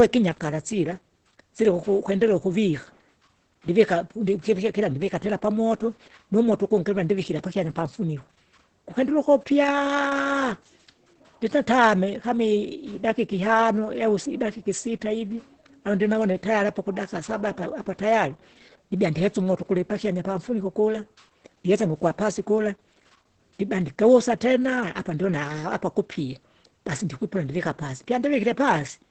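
From start to end the speech carries Opus voice compression damage, and it is heavy. Nothing is present above about 8.6 kHz, which points to the wideband SILK linear-prediction mode at a low rate, around 10 kbps. With so few bits the excitation is coded coarsely, so the speech sounds muffled, hoarse and slightly robotic, with the coder working in 20 ms frames.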